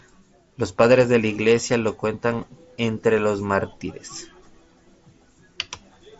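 Speech over a Bluetooth mSBC headset link, with nothing above about 7.7 kHz, and no technical faults to report.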